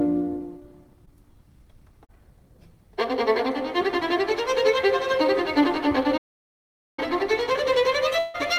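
The audio has three kinds of fault. Two short concealed packet losses occur, at 1.05 to 1.09 s and 2.05 to 2.11 s. About 20 ms and then 40 ms of audio failed to arrive in time. The receiver extended the preceding sound to cover each gap, which leaves a brief smear or wobble. A playback stall follows from 6.17 to 6.99 s. The output falls silent for about 0.8 s in mid-flow, then resumes. The likely cause is the player running out of data or its thread being blocked. Finally, a long network dropout affects 8.19 to 8.36 s. Roughly 160 ms likely never arrived. The receiver filled almost all of it by continuing the last sound as a fading buzz or hiss, with no true silence, before real audio returns further on without the lost part.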